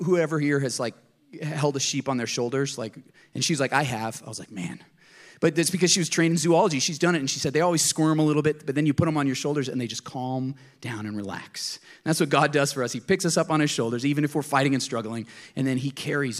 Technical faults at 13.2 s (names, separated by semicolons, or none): none